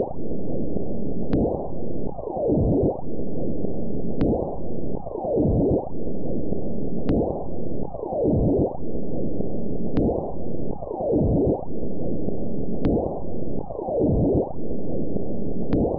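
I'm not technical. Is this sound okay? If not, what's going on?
Yes, the sound is technically fine, with no audible faults anywhere in it.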